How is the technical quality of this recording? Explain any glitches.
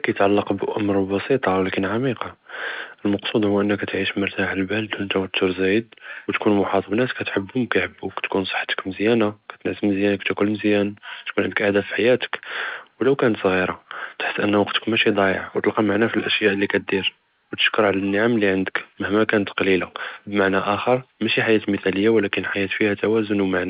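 No glitches can be heard anywhere in this speech recording.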